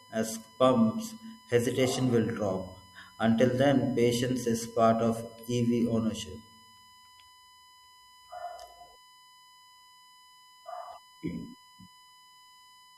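A steady USB whine runs under the speech from start to finish. It is a fixed tone at 1 kHz, and that is also its strongest component. The pitch points to the 1 ms frame rate of a USB bus. Current drawn in each frame has leaked into the audio through the power or ground path. The tone sits roughly 30 dB below the speech. It is faint, and easiest to hear in the pauses.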